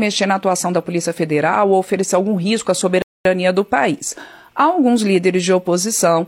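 At 3.02 s a rebuffering stall cuts the sound to silence for about 0.23 s; playback starved of data, then resumed exactly where it stopped, unlike a dropout that loses material.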